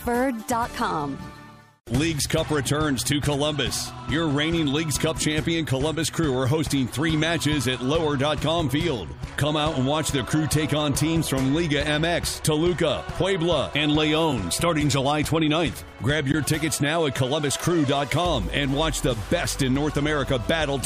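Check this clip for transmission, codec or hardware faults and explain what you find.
Three short dropouts, all of one kind: a gap between stream segments at 2.31 s, 14.32 s and 16.32 s. Timestamps on adjacent 2-second segments leave small holes that the player fills with silence, about 6, 4 and 17 ms long. Each is a hard-edged break, with nothing missing on either side.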